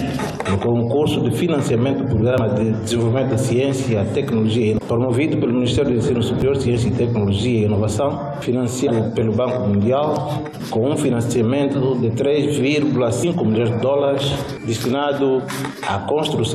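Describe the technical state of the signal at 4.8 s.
At 4.77 to 4.79 s there is damaged data in the compressed stream. The decoder misreads the corrupted frames, loses sync, and hunts for the next valid frame header. The result is a short glitch of about 20 ms, heard as a brief chirp or blip.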